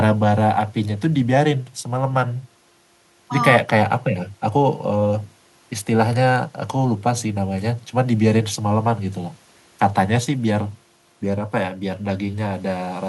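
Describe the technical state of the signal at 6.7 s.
At 6.7 s the signal is intact, with no dropout, clipping, glitch or other fault to be heard at that moment.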